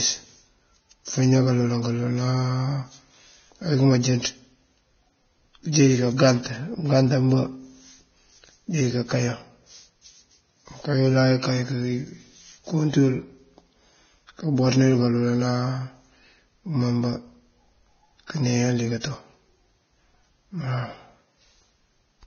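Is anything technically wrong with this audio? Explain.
Yes. Vorbis compression throughout: nothing above 6.6 kHz, hissy, grainy treble and roughened tone, likely from an encode near 18 kbps coarsely quantising detail into noise.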